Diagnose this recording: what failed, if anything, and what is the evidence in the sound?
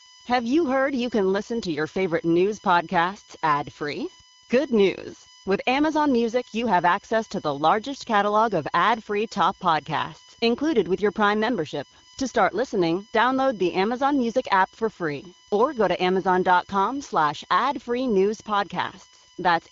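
USB whine runs through the whole speech clip at a fixed 1 kHz pitch, strongest at the harmonic near 19 kHz and sitting around 25 dB below the speech. The failure is in analogue wiring: the bus's 1 ms frame current is leaking into the audio through shared power or ground.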